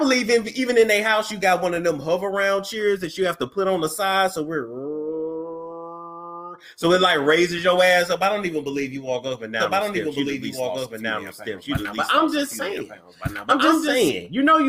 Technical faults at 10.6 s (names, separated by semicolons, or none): doubled audio track